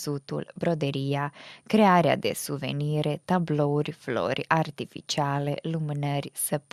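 Speech recording with no audible technical faults.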